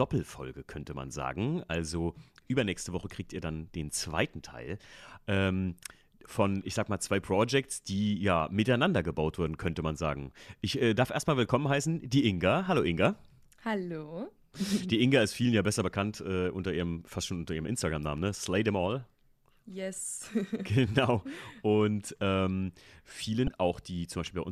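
Speech recording with a single fault near the end: damaged data in a compressed stream, lasting about 48 ms from 23.45 to 23.50 s. Bytes in that stretch of the encoded file are corrupt, so the decoder can't read those frames properly, loses its place in the stream and has to hunt for the next valid frame header before normal decoding resumes. The result is a brief, abrupt glitch breaking into the speech just before the clip ends.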